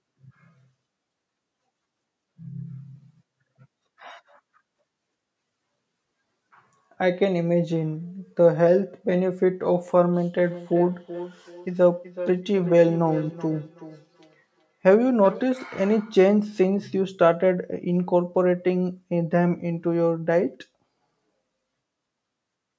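Speech recorded through a call's microphone processing, with nothing above 8 kHz, has a feedback echo between two devices from 10.5 to 15.5 s. A second device in the room replays the call, and the microphone catches it again. Each word returns roughly every 0.4 s, thinner and ringing, peaking about 14 dB below the speech.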